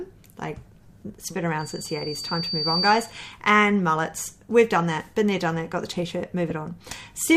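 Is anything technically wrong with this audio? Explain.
Yes, two things. From 1.59 to 3.26 s there's loudspeaker feedback squeal: the mic hears its own speaker, and a 4.6 kHz tone builds over about a second until it's roughly as loud as everything else.

At 6.5 s there's a lost LE Audio frame. About 7.5 ms went missing, and the LC3 decoder patched the gap with the previous spectrum under random signs, leaving a brief noisy smear.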